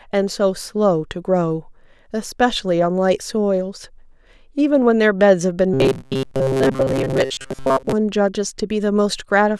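From about 5.74 s to 7.93 s the speech turns into a rigid, metallic buzz pitched around 133 Hz, still loosely tracking the words. That's robotic sound from repeated short buffers, likely from audio arriving too slowly, so the same short chunk, about 7.5 ms long, gets replayed to fill the gaps. Roughly two-thirds or more of that stretch is recycled material rather than fresh audio.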